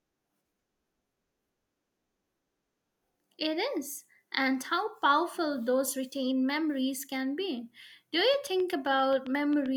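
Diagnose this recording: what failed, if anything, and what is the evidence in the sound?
A train of clicks runs from 8.20 s to 9.67 s, near the end of the speech. There are about ten of them. They arrive at a steady 7.6 per second and share much the same sharp shape. The loudest stand out around 5 dB above the speech. The stage is likely the analogue wiring or the power supply, either picking up interference from nearby equipment or through a faulty connection.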